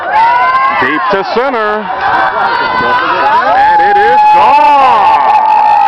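From start to end, the sound is dull and gurgling, with a granular grit. This is likely MP2 compression at a low rate, near 80 kbps. Too few bits reach the upper sub-bands. They flicker off, and the rest are coarsely quantised.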